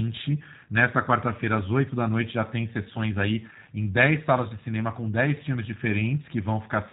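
From start to finish the speech has been through the G.729 codec, and the damage is plainly audible. Nothing above 4 kHz survives, so it sounds boxed-in and dull. The voice is rebuilt from a vocal tract model, a pitch predictor and a handful of pulses per frame rather than the real waveform, which gives it that slightly rough, synthetic buzz. It fits a low-rate coder running at around 8 kbit/s.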